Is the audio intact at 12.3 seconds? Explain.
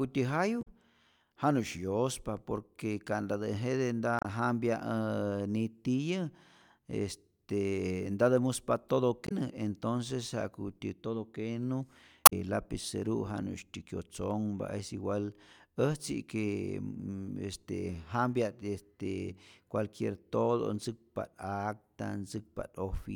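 No, not quite. Right after "entonces ja'kutyä todo kenu" there's a short burst of damaged data in the compressed stream, running from about 12.25 to 12.33 s. Part of the encoded data there is corrupted, so the decoder can't read those frames properly. It loses its place and hunts for the next valid frame header before picking the speech back up. You hear it as a brief blip.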